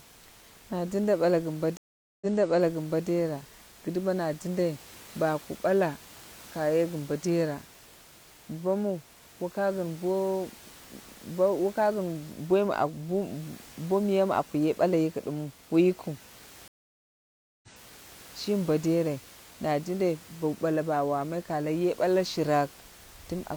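Just after "gin bo", at 1.77 to 3.07 s, the speech drops out for 0.44 s and resumes 0.85 s earlier, repeating a stretch. At 16.68 to 18.18 s a 0.95 s gap is followed by a 0.56 s repeat. Both are stream reconnects: the connection broke, the player restarted its decoder mid-stream, and the server resent a burst of audio it had already played.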